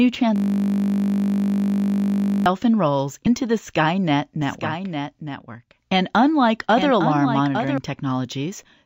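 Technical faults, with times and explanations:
0.36–2.46 s: system hang loop. A 20 ms slice of audio repeats exactly, back to back, about 105 times, which produces a steady buzz at 50 Hz in place of the programme material. This is what happens when the computer or its audio driver stalls and the sound hardware keeps replaying the same ring buffer. Because the buffer is this short, the repeats fuse into a tone at the loop rate instead of a stutter.
3.25 s: compressed frames skipped. The audio jumps forward by roughly 70 ms, which fits about three missing frames of 23.2 ms each. Those frames were either absent from the stream or rejected by the decoder as corrupt, so playback resumes further along.
4.42–7.78 s: doubled audio track. A second, full-band copy of the audio runs about one second behind the original and about 10 dB quieter. It has no decay tail or room colouring, which separates it from a real echo, and it starts and stops abruptly at the edges of this span. 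The likely cause is the same signal being mixed in twice, either through a second, slower capture path or an edit that left two offset copies in place.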